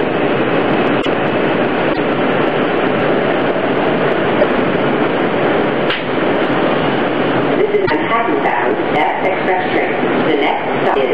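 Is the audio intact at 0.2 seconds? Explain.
Yes, the audio is intact at 0.2 seconds, with no dropout, click, distortion or other fault at that point.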